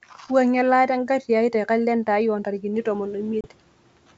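A noise suppressor catching up on this speech recording lags a sudden background rise near 2.5 s, so from 2.73 to 3.26 s the noise passes less reduced, then sinks by about 10 dB over roughly half a second. Packet loss on an ADPCM call then drops a few packets, leaving a hard-edged 30 ms silent hole from 3.41 to 3.47 s, after which the mismatched decoder state brings the sound back slightly distorted.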